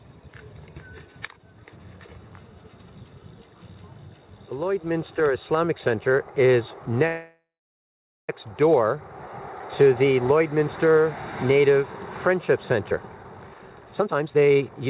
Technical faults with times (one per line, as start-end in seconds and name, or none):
7.07-8.29 call audio freeze
12.91-14.89 jitter buffer speed-up